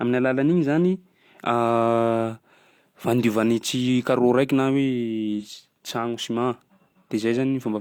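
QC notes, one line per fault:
5.39–5.45 s, AAC frame loss with concealment. A brief smeared, noisy patch interrupts the speech. About 43 ms of audio is missing, which fits one lost frame. The decoder rebuilt it from the previous spectrum, so detail blurs rather than dropping out.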